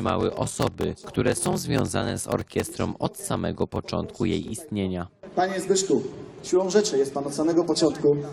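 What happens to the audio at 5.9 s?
Nothing goes wrong at 5.9 s; the audio plays through that moment intact, with no dropout, click, glitch or other fault.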